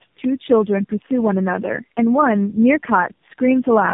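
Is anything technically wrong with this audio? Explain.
Yes. Tandem speech coding is present for the whole clip. The speech sounds like it passed through three low-rate speech coders in a row, consistent with something like G.729A followed by two AMR-NB stages with G.711 links between them. Each coder re-models an already degraded signal, so errors compound: the speech comes out rough, muffled and warbly, with nothing above 3.7 kHz.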